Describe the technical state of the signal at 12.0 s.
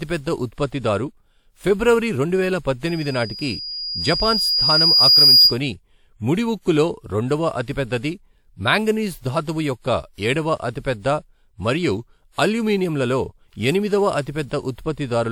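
At 12.0 s the speech carries generation loss, present across the whole clip rather than at that moment alone. It sounds swirly, hollow and smeared, with consonant attacks blurred, most likely from repeated lossy passes, around four WMA encodes at 96 kbit/s, each requantising on a shifted frame grid so errors pile up. A spectrogram would show smeared transients, with content still reaching about 20.1 kHz; the waveform's onsets look softened.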